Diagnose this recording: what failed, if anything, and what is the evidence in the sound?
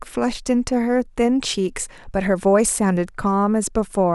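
Nothing failed here as far as I can hear; the speech comes across without any dropout, glitch or distortion at any stage of the chain, so there's nothing to diagnose.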